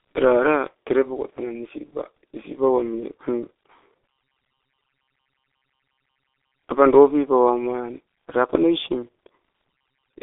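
From start to finish, the speech has passed through a G.723.1 codec, an early internet-telephony coder that models the voice in coarse 30 ms frames at a very low data rate, which fits the roughly 6 kbit/s it is built for. The line band confines the sound to about 300 Hz to 3.5 kHz, with nothing above 3.7 kHz. The damage is heavy: the voice sounds muffled and hoarse, and consonants blur together.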